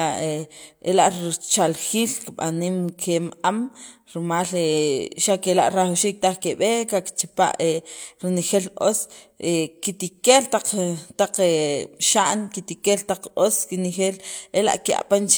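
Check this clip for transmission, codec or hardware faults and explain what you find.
Checking this clip turns up no faults to explain.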